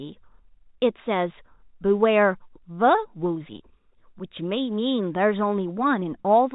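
There are no technical faults to describe anywhere in the speech, which comes through G.711 mu-law telephone coding at 64 kbps as expected.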